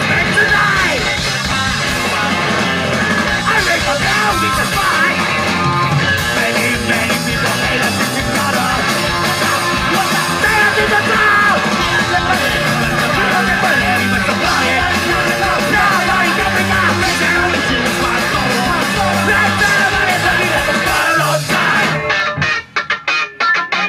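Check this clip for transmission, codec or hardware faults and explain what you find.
No transmission, codec or hardware faults.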